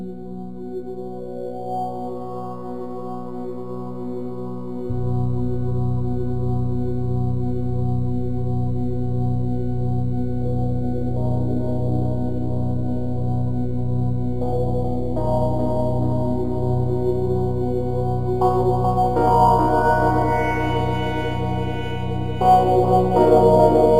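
Throughout, crude rate conversion adds a gritty, inharmonic fizz tracking loud and high sounds, fitting samples repeated to stretch 44.1 kHz to 48 kHz. Unlike clipping, it stays well below the signal.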